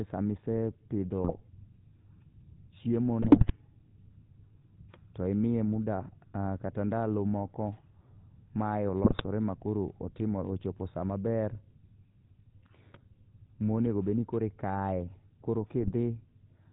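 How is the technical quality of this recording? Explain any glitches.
The quality is rough. The whole thing sounds like an old mobile call, and there are four short bursts where the line breaks up.

Throughout, you're hearing the GSM full-rate codec, with a buzzy, gravelly edge that fits the 13 kbps full-rate coder. It rebuilds the voice from a vocal-tract model fed by coarse, regularly spaced pulses, so the fine texture is lost. Nothing comes through above 4 kHz, which makes the sound dull and boxy.

Then there are GSM bit errors at 1.24 to 1.41 s (just after "sama isepidho"), 3.22 to 3.52 s, 9.04 to 9.21 s (right before "ma koro") and 15.80 to 15.93 s. Corrupted bits hit the decoder's filter, pitch and gain values, so each frame gets a warped spectrum or a level spike. You hear squawky, gargling pops.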